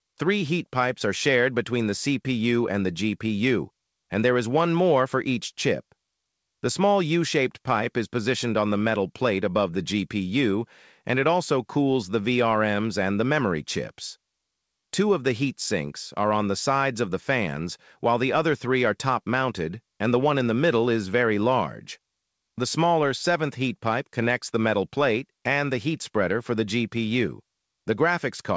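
No faults are audible; the audio arrives over a call path whose band stops at 8 kHz, which fits a wideband codec such as G.722 at 64 kbps.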